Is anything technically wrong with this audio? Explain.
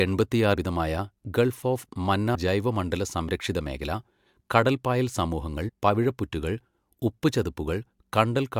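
Yes. Compressed frames are skipped twice: at 2.34 s, after "ഗൾഫ് ഓഫ്", about 100 ms of speech is lost, and at 5.68 s, after "കടൽപ്പായൽ സമൂഹങ്ങൾ", about 70 ms. Whole codec frames were dropped, consistent with runs of 24 ms frames. Each time the audio jumps ahead by the length of the missing frames.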